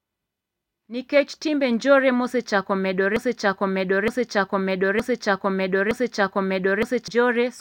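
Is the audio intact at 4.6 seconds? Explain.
No. At 4.6 seconds the audio is caught in a broken-record loop that runs from about 3.16 to 7.08 seconds, starting just after "nikech timbe njore mosechako". A fragment about 0.92 seconds long plays back to back, identical each time, four times over. The likely cause is a stall in the player, encoder or stream, which kept resending the last piece it held. The speech that belonged in that span is gone.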